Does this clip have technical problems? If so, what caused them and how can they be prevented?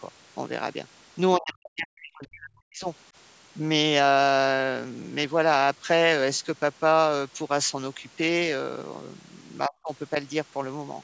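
Yes. Speech suppressed in double talk cuts the speech from 1.37 to 2.86 s and again from 9.67 to 9.9 s, dropping it by roughly 40 dB. This likely comes from an echo canceller mistaking near-end speech for loudspeaker echo. The waveform shows near-silent gaps, and the spectrogram shows dark vertical bands. A better-tuned canceller with double-talk detection prevents it.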